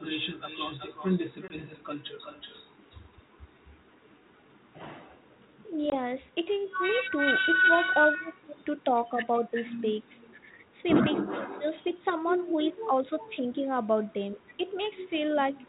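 Speech carries an echo with no canceller through its whole length: each phrase is followed, roughly 0.4 s later, by a copy only about 7 dB quieter and thinner than the original. That delay is too long and too distinct for room reverberation, which would smear the sound rather than repeat it. It points to a far end playing the call on a loudspeaker and sending it back across the network, with nothing there to strip it out. The audio is band-limited below 4 kHz with a faint grain, consistent with a 32 kbit/s ADPCM link. That link suffers packet loss at 1.48 to 1.54 s and again at 5.90 to 5.95 s, each a hard-edged hole of about 20 ms, which fits a single lost packet. What separates this from a simple dropout is the recovery. When sound resumes, the ADPCM decoder's prediction and step size no longer match the sender's, so the speech comes back slightly distorted before settling over the next few tens of milliseconds.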